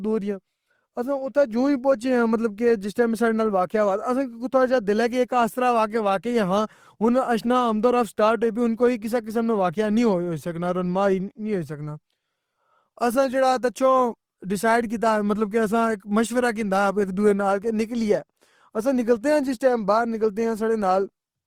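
From start to finish the speech has a grainy, rough texture: tones lose their clean edges and take on a fizzy, noise-filled quality. There are no obvious spectral holes or swirling, and the top end still extends to about 20.3 kHz. This is likely Opus compression in its CELT music mode, at a rate that fits roughly 24 kbps. With too few bits, the encoder keeps each band's energy but fills in detail with folded or noise content.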